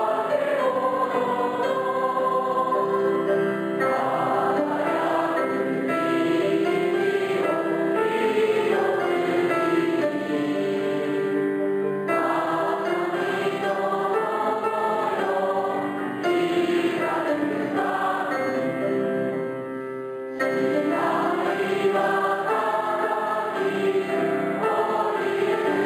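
A faint metallic shimmer on sibilants and bright sounds, with dulled top end, runs throughout: imaging from linear upsampling, which fits straight-line interpolation from 11 kHz to 44.1 kHz, leaving mirror images around 5.5 to 11 kHz, roughly 35 dB down.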